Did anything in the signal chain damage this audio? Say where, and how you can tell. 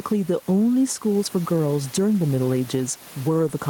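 Yes, there's gain pumping running through the whole clip. The room noise sits about 29 dB under the speech, and the gain moves by something like 10 dB. Loud and quiet parts are pressed close together, so the speech sounds squashed. The likely cause is input gain set far too hot at the mic stage, with a fast limiter or compressor clamping down on every peak.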